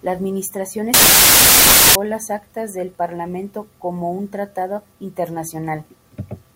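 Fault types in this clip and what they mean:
Samples built from the wrong bytes: From 0.94 to 1.95 s the speech turns into loud, harsh broadband noise. Each sample's bytes are joined in the wrong way. The fast-changing low bits become the large part of every value.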